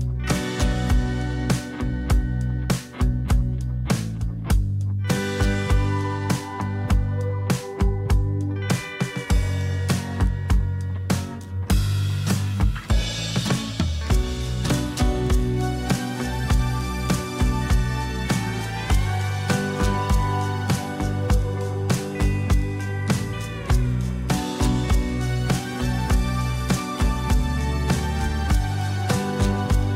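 No technical faults can be heard anywhere in the audio.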